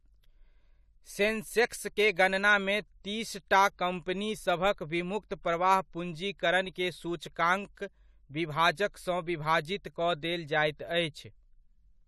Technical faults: pre-echo

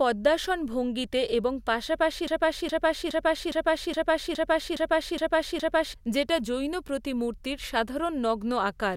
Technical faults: broken-record loop

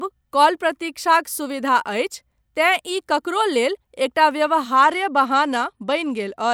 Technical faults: Bluetooth SBC bit pool drop

